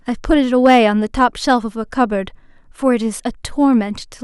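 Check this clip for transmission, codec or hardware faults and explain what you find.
One fault stands out in the speech.

Hard clipping, from 0.33 to 0.86 s: the signal runs about 3 dB past what a stage in the chain can pass, so its peaks are sliced flat. Those squared-off tops add high harmonics, heard as crackle on the loudest moments.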